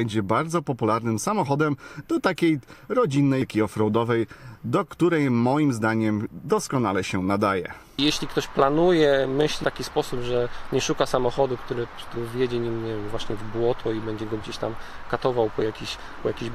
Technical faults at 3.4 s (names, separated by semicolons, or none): damaged data in a compressed stream